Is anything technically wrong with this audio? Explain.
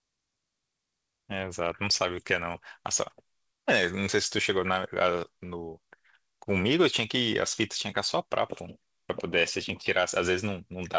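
No, no technical faults found.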